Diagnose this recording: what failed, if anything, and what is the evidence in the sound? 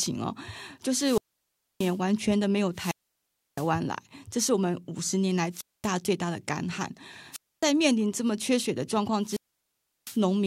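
The wireless link dropped out five times, a classic wireless microphone squelch dropout, and it happened on the radio side before anything reached the converter. At 0.96–1.99 s, 2.73–3.71 s, 5.51–5.90 s, 7.31–7.66 s and 9.22–10.21 s you get a rise of hiss, then near-silent holes of about 0.63, 0.66, 0.23, 0.26 and 0.71 s as the FM signal fades and the receiver's squelch shuts the output, then the speech comes back.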